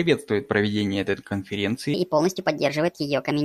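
From 1.94 s to the end, a section at the wrong speed plays 1.36 times too fast, likely from a mismatched playback clock. The speech turns hurried and about five semitones higher. A spectrogram shows harmonics and formants stepping abruptly upward, and the waveform's cycles pack tighter.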